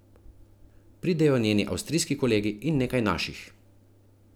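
At 2.19 s a DC step occurs: the waveform's zero line jumps by about -40 dBFS and then relaxes back, consistent with a 20 Hz high-pass draining the offset. It is heard as a brief low thump, while the speech continues unaffected.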